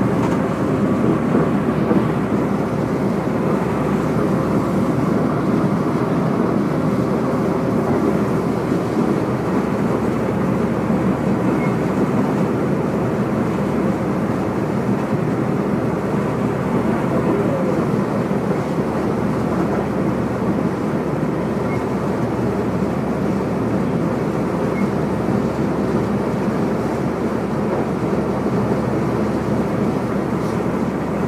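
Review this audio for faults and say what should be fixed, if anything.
No faults found; nothing needs fixing.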